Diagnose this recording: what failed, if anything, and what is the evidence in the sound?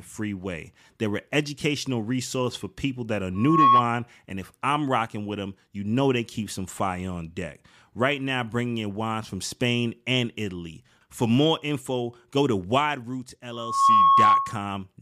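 The microphone in the analogue path is picking up its own loudspeaker, and loop gain exceeds one near 1.1 kHz. Hence loudspeaker feedback squeal: a tone swelling over about a third of a second to roughly 10 dB above the speech, at 3.35–3.86 s and 13.52–14.67 s.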